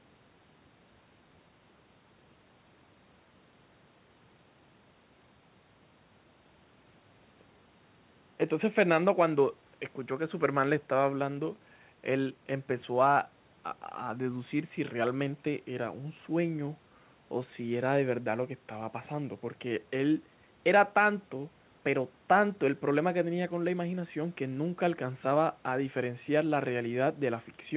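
No faults found in this speech; the call chain behaves as expected, with the low bass rolled off by the microphone processing and the top end stopping at 4 kHz, consistent with a narrowband G.711 link.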